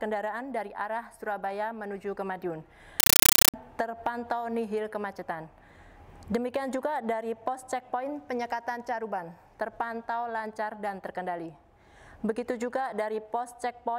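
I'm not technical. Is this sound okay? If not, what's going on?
No. From 3.00 to 3.54 s there's harsh, loud chattering static, a compressed stream played as audio: undecoded Dolby Digital data pulsing about 31 times a second.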